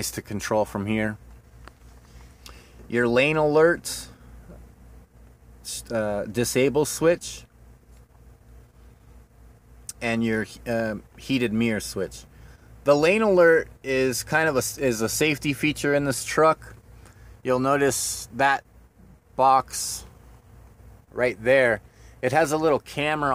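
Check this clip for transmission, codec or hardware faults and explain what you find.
Nothing in the transmission path, encoding or playback hardware stands out as faulty anywhere in the audio.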